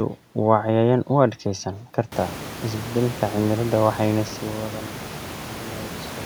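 The speech signal shows no technical faults: the smooth level changes sound like deliberate fader moves, and the room noise that rises by about 23 dB around two seconds in, settling about 15 dB below the speech, comes from the recording space rather than from the system.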